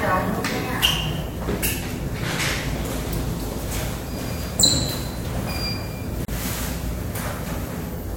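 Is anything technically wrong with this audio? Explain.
Yes. At 6.25 to 6.28 s there is a gap at a join of encoded pieces: a gap of about 33 ms cuts into continuous sound with smeared edges. Separately encoded segments were joined untrimmed, leaving encoder delay and end padding in place. The sound then resumes where it stopped.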